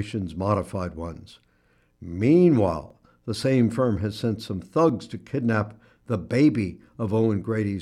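At 2.90 s and 4.89 s, overlap between stream segments removes a sliver of speech where adjacent 2-second segments' timestamps collide, producing a brief skip.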